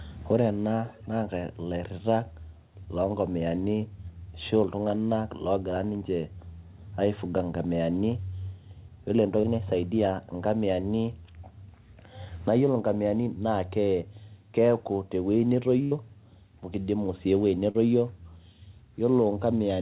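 From 0.87 to 1.08 s a faint delayed copy of the speech sits under the main signal. It trails by 207 ms and is quiet, roughly 25 dB below the speech. This is an echo leak. The likely cause is a loudspeaker at the far end whose echo canceller let part of the pickup through, so that part came back down the line.

At 9.40 to 9.46 s there is a short concealed packet loss. About 40 ms of audio never arrived in time. The receiver covered 32 ms of it by extending the last sound, then blended back into the real signal. It is heard as a brief smear in the flow.

From 15.83 to 15.94 s comes a burst of packet loss. About 80 ms went missing in a row. The receiver carried the last sound forward for 80 ms and faded it as the gap went on. So a held, dimming tail replaces what should be there. The speech then picks up further along, with that stretch gone.

At 17.71 to 17.77 s a second short concealed packet loss occurs. 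About 40 ms was lost and 30 ms was filled by continuing the prior sound. It gives another small wobble before the real audio returns.

Throughout, nothing is heard above 4 kHz. That narrowband ceiling fits a G.711 call codec.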